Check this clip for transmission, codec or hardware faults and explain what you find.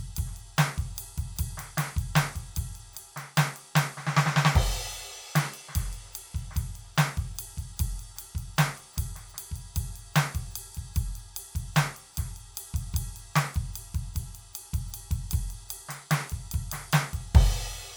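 No transmission, codec or hardware faults are audible anywhere in this music clip.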